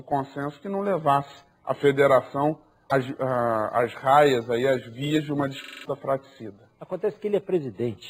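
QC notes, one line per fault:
2.87–2.92 s, damaged data in a compressed stream: a single brief glitch lasting about 50 ms, with nothing repeating before or after it. Corrupted bytes in the coded stream left the decoder unable to read those frames properly. It lost sync there, then locked back onto a valid frame header and carried on. That one-off, non-repeating glitch is what separates it from a driver loop, which repeats identical audio.
5.64–5.85 s, system hang loop: one 42.67 ms slice of audio plays five times in a row, giving a hard, mechanical stutter at 23.4 Hz. The system stalled while the sound hardware kept cycling its ring buffer, and the loop length fits a 2048-sample buffer. About 200 ms of new audio never arrives. Unlike a corruption chirp, each repeat is an exact copy, so the stutter holds a fixed rate rather than sounding random.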